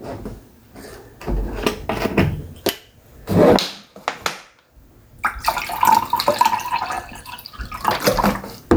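From start to finish the gain pumps, a swing of roughly 15 dB, so loud and quiet moments end up closer in level and everything feels squashed. This is gain pumping, likely caused by input gain set far too high for the microphone, with a fast limiter or compressor clamping down on every loud event and releasing in the gaps.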